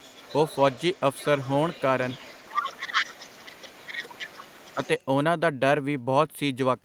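Other side's voice leaking through runs from 0.0 to 1.82 s and again from 2.02 to 5.04 s. A faint second voice sits under the speech, about 20 dB down at first and then somewhat louder, about 15 dB below it. The likely cause is an echo canceller that failed to strip the loudspeaker playback out of the microphone signal.

Speech suppressed in double talk follows from 2.45 to 4.33 s, while that second voice is still present. The talker's speech dips by as much as about 20 dB, adding up to roughly one and a half seconds of loss. Faced with both sides talking at once, the canceller likely could not separate the two and turned everything down.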